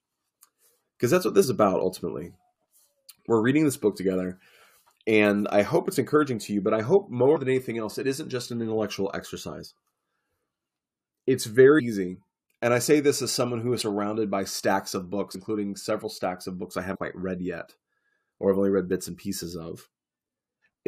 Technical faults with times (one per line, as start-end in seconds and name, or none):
1.43 compressed frames skipped
7.35-7.37 compressed frames skipped
11.78-11.80 compressed frames skipped
13.80 compressed frames skipped
15.34 compressed frames skipped
16.94-16.96 compressed frames skipped
20.61 compressed frames skipped